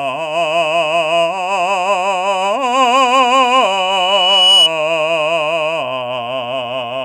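A music clip with loudspeaker feedback squeal from 3.37 to 4.70 s: a single 2.9 kHz tone swells over roughly a second until it sits a few decibels above the music, as the microphone re-amplifies its own loudspeaker. The gradual swell separates it from steady interference whine.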